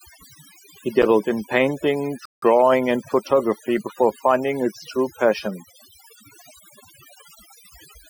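It's a speech recording with overdone noise removal running right through it. The reduction was set so hard that the background drops and breaks up into little twinkling specks, and quiet parts of the voice got pulled down along with the noise bands. Then at 2.25 s there's a rebuffering stall: the playback just stops dead for about 0.17 s, until 2.42 s, and picks up exactly where it left off, so nothing's missing, it's just stretched by that gap.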